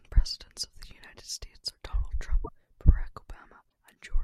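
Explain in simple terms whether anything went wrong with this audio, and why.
At 2.44 to 2.49 s, and again briefly at 3.69 s, the speech skips ahead. The likely cause is a broken MP3 bit reservoir. Frames were lost, and the next frames borrowed data that was no longer there.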